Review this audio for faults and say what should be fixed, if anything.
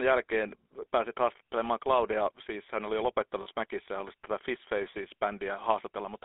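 The speech was passed through the GSM full-rate codec, which rebuilds the voice from a vocal-tract model driven by sparse, regularly spaced pulses, at a rate that fits 13 kbps. That coarse excitation gives the whole clip a plainly audible buzzy, gravelly roughness, and the line band confines it to roughly 300 Hz to 3.6 kHz, so it sounds thin and boxy. To prevent this, carry the call over a wideband codec such as AMR-WB or Opus instead of GSM full rate.

Lost GSM frames appear from 3.42 to 3.47 s, just after "hän oli jo". About 40 ms of data went missing, which fits two consecutive frames, and the decoder concealed the gap by repeating the last good frame's parameters. That replaces the true sound with a brief rough, metallic ring before normal decoding resumes. To prevent this, improve the radio link or add stronger channel error protection so frames arrive intact.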